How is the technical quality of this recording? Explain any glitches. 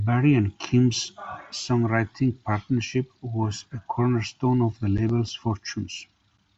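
No glitches found; the speech recording runs its full course without a single audible technical fault.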